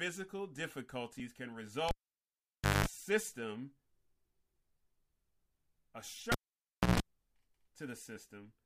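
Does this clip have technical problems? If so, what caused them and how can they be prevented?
Yes. A cable pulled and plugged in while live, at 1.89–2.86 s and 6.32–7.00 s. Each starts with a pop and goes near-silent for 0.93 s and 0.63 s. A 50 Hz buzz of 0.2 s, then a 60 Hz buzz of 0.15 s, sounds as the plug tip touches, and a second pop follows. That pop, gap, hum and pop order sets it apart from a plain dropout or crackly lead. Mute the channel before changing cables.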